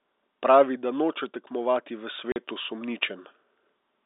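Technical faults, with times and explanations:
0.31–1.21 s, automatic gain falling: The speech starts loud, and over about nine tenths of a second the level eases down by about 4 dB. The gain control judged the incoming signal too hot and pulled its gain back gradually, so the background sinks together with the speech rather than the speaker growing quieter. The telephone band, limited to roughly 300 Hz to 3.7 kHz, is the same before and after the drop.
1.53–3.1 s, automatic gain rising: The level climbs by about 6 dB across roughly a second and a half. The gain control treated the input as too quiet and raised its gain step by step. Speech and background noise swell together, which separates this from a talker raising their voice, where the background would stay put. Because the rise is slow, it sounds like a gradual bloom and not a jump.
2.32–2.36 s, packet loss filled with silence: Partway through the gain rise, a 40 ms hole cuts the speech, with abrupt edges. 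The receiver got nothing for that stretch and played silence in its place. The gap's length suggests two consecutive 20 ms packets went missing, the usual framing for a G.711 telephone stream. A silent fill leaves a dead gap, where concealment would have smeared it over.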